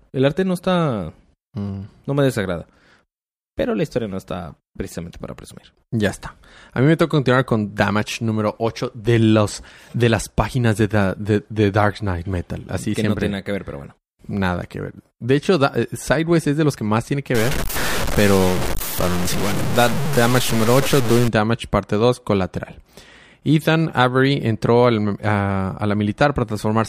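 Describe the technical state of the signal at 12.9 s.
At 12.9 s the speech signal is intact, with no audible dropout, distortion, clipping or other fault at that point.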